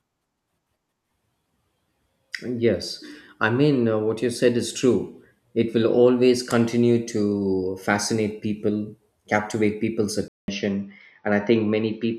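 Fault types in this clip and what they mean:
Input switched to a poorer device: right after "fascinate people captivate people's", at 10.28 s, the speech stops for about 200 ms, then returns duller and boxier to the end at no obvious change in loudness, likely because the recording input moved to a lower-quality microphone or headset. On a spectrogram the energy is cut off flat at 6.1 kHz from that point, with a faint new noise floor about 55 dB down; the waveform shows the brief gap.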